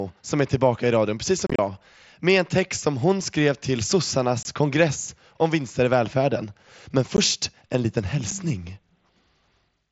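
Unconcealed Bluetooth headset packet loss punches abrupt holes in the speech: a crackly cluster from 1.47 to 1.59 s, then 3.33 s, 4.43 to 4.45 s, 7.17 s and 8.31 s. Headset packets never reached the phone, and silence or an idle pattern filled each gap. The cluster holds gaps up to 30 ms. The single dropouts last about 7.5 ms, which fits one packet each. All of this sits on a wideband mSBC link with its light grain.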